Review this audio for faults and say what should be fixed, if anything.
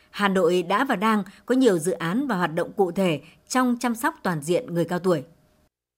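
Nothing stood out on listening to this speech recording, so there is nothing here that needs fixing.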